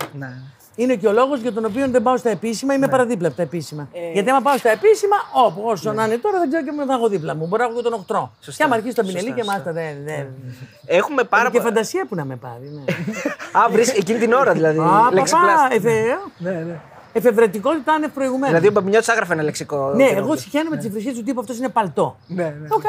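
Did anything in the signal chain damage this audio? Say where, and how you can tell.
No, nothing in the signal chain stood out as damaging this audio on listening.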